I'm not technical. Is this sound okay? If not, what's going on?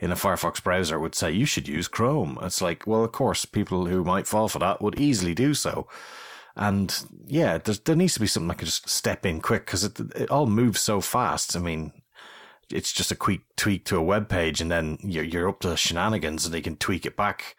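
No. There are three loud pops in this speech. The first comes at 1.77 to 1.79 s, after "would say you should". Two more arrive in quick succession from 4.97 to 5.22 s, between "fall for that would" and "do so". Each pop is louder than the speech, which continues underneath. A brief electrical jolt, likely from a plug, switch or static, caused them.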